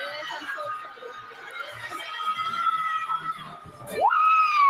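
A noise suppressor built for speech was left running on this material, treating steady parts as noise, so the level pumps and thins with swings of around 20 dB. From 0.78 to 1.81 s, and again from 3.37 to 3.83 s, the suppressor cuts the sound by up to about 10 dB, so held parts sink and tails shorten.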